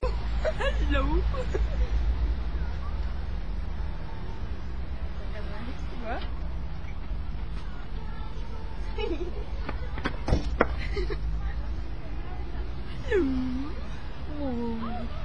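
Throughout, the sound is dull and gurgling, with granular distortion and upper bands flickering in and out, which points to MP2 compression, likely at a low rate around 80 kbps. Unlike a plain low-pass filter, the missing treble comes and goes rather than staying cleanly cut.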